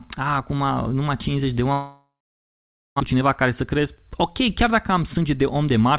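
Speech, carried over a narrowband call link with nothing above 4 kHz, consistent with G.711 A-law at 64 kbps. From 1.72 s to 3.02 s the sound stops: the last moment is stretched into a fading buzz, then about 0.87 s of silence, and the speech resumes having skipped roughly 0.94 s. This is a long network dropout, likely from packets that never arrived. Unlike brief packet-loss concealment, which patches a few tens of milliseconds, the fill here dies into silence and content is lost outright. The outage also leaves a backlog of around a third of a second, and from 3.14 s to 5.92 s the jitter buffer speed-up works it off. It drops short pitch-period slices over and over, so the speech runs about 8% fast and sounds hurried, shedding roughly 0.2 s in total. What separates this from a sped-up recording or a pitch shift is that the pitch stays where it was; only the pace tightens.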